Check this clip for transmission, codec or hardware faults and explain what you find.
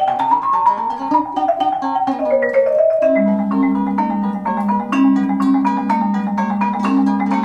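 One fault runs through the whole clip: a wrong sample rate. Audio captured at about 32 kHz is played at 44.1 kHz without conversion, so everything runs 1.38 times fast and about 5.55 semitones high. On a spectrogram, every feature sits proportionally higher, and the waveform's events are compressed in time.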